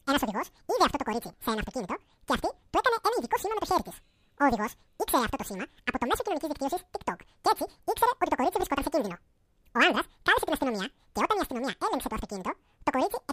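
Audio read two samples at a time (double speed) affects the whole clip. The speech runs at twice its natural rate and sits a full octave, 12 semitones, above where it belongs, because the player treated each pair of samples as a single frame, as if the stream held two channels or wider samples. Voices sound chipmunk-like and hurried.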